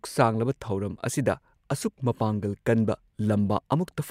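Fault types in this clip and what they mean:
Nothing here calls for a fault line: the speech comes across with no dropouts, clicks, distortion or other glitches to point to.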